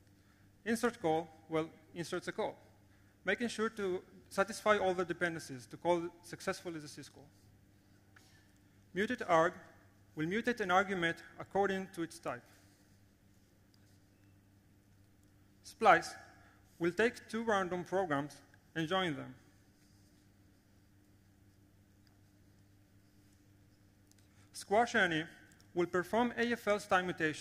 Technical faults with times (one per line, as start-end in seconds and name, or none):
none